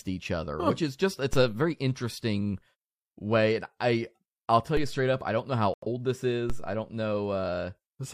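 At 1.33 s, between "which is just it's" and "a very interesting", a DC step occurs. The waveform's zero line jumps suddenly. A low thump marks it. The offset then decays away slowly, as if through a 2 Hz high-pass. The speech carries on unchanged.

A second DC step follows at 4.77 s, with the same thump and slow decay.

At 5.74 s, just after "I don't know how", a digital broadcast dropout cuts in. The receiver lost valid frames and muted until good ones returned at 5.87 s. About 85 ms of programme is gone, which fits two lost frames.

A third DC step lands at 6.50 s, just before "I don't". Again a low thump, then the offset drains off gradually.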